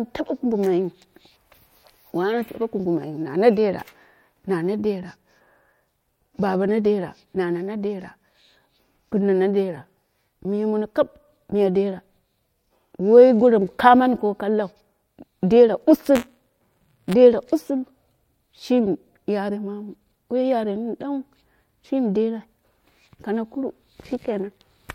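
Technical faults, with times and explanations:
16.15–17.13 s, buffer tearing: writer and reader of the ring buffer overlap, so each period splices in a small sliver of audio about 20 ms stale. The hard joins produce a 172 Hz rattle over the speech, which fits a 256-sample buffer. The waveform shows regular discontinuities, and the spectrogram shows vertical striping at that rate.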